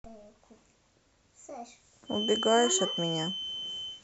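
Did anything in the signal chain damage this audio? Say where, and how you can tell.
Yes. The analogue acoustic path is the likely culprit: a loudspeaker feeding back into the microphone with loop gain sitting just at the edge of instability. The result is a feedback whistle, a thin, steady tone near 3.1 kHz that enters at 2.04 s and persists to the end of the speech, only about 5 dB beneath it. It holds one frequency without building up, swelling and fading slowly in level, which is the signature of a loop poised right at the howl point.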